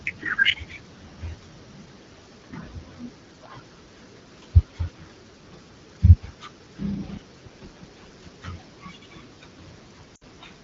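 Right at the end, from about 10.15 to 10.24 s, there's a burst of lost AMR speech frames. The decoder stretches the last good sound and fades it fast in this wideband AMR-WB stream, leaving a dip about 60 ms long, which fits three dropped 20 ms frames.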